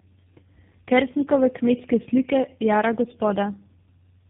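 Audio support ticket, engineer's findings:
Tandem speech coding throughout: three low-rate speech codecs in series (GSM full rate twice, ending G.729A 8 kbit/s), G.711 hops between. Each re-encodes the previous coder's errors. Result: rough, muffled, warbly speech, nothing above 3.6 kHz.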